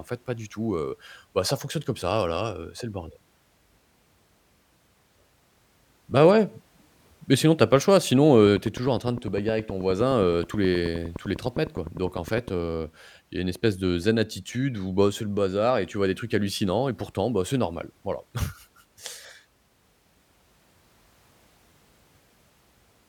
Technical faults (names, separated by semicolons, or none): train of clicks